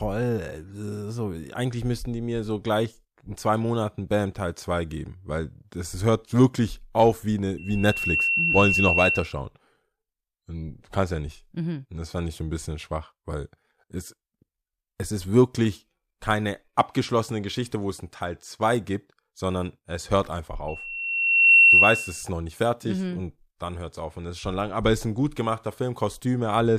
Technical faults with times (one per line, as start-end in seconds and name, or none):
7.57-9.37 loudspeaker feedback squeal
20.68-22.24 loudspeaker feedback squeal